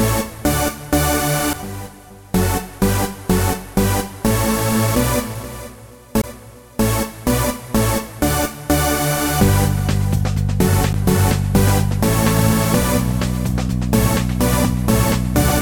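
The laser pickup lost its place on the disc's spiral three times and landed on another turn, producing a CD skip at 1.53 s, from 6.21 to 6.24 s, and at 10.93 s. Each time, the player briefly mutes, for a few milliseconds, about 20 ms, and about 10 ms respectively. The mute is heard as a tick or short gap, and the audio resumes abruptly from a different point in the material, displaced by one or more turns of the disc.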